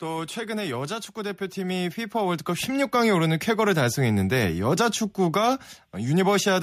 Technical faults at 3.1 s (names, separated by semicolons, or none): automatic gain rising